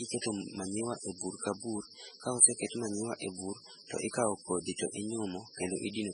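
Throughout the speech, nothing remains above 10.5 kHz and the sound swirls wetly, unlike a clean low-pass, likely from heavy MP3 compression fitting a 16 kbps bitrate.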